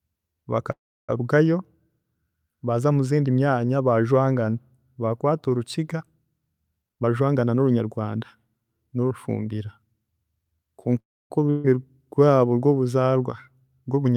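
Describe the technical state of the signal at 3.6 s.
At 3.6 s the audio is intact, with no audible fault at that moment.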